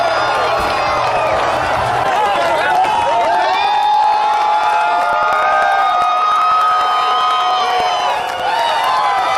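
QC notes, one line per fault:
0.08 to 9.29 s, periodic USB or driver dropouts: a steady tick runs through the clip at a fixed spacing of 0.099 s, roughly a hundred times in all. Each time, something like a millisecond of audio is skipped rather than filled with silence, so the waveform jumps and clicks. The strict regular spacing separates it from random dropouts, and because it is heard only where there is signal, the cause is lost samples rather than added interference.
6.38 s, lost LE Audio frames: a single 10 ms Bluetooth LE Audio frame is missing here. The LC3 decoder fills the gap by reusing the previous spectrum with randomised signs, so the sound turns briefly into a noisy smear instead of cutting out. Unlike the dropout ticks, nothing is skipped and there is no hard edge, only a short patch of noise-like replacement. Since just one frame is lost, the concealment has no time to fade towards silence.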